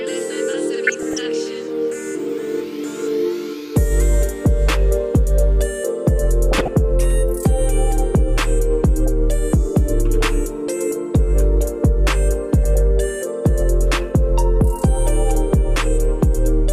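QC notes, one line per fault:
throughout: MP2 compression. The whole clip sounds dull and plainly gurgling, with a grainy edge on the remaining detail and upper frequencies that seem to come and go. This is likely low-rate MPEG Layer II coding, and the damage fits a rate around 80 kbps. At that rate the encoder can't fund all 32 sub-bands. Upper bands drop out frame by frame, and the bands it keeps are coarsely quantised, which produces the granular texture.
0.87 to 1.18 s and 6.52 to 6.77 s: DAB burbling. In each short burst the sound breaks up with burbling blips of noise, and the second burst is more agitated than the first. Bit errors have slipped past error correction into the MP2 data, at a rate on the order of a few tenths of a percent. The corrupted samples put short blips of noise into single sub-bands, and corrupted scale factors make sub-bands jump in level for up to a frame, and that gives the burbling effect.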